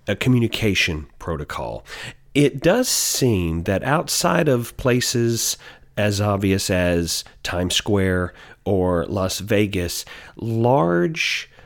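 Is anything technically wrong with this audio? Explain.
No, nothing is technically wrong with this audio.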